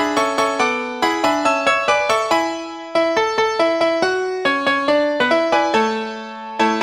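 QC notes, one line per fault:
Throughout: audio read two samples at a time (double speed). Sample pairs are taken as single frames, so everything plays twice as fast and an octave (12 semitones) higher.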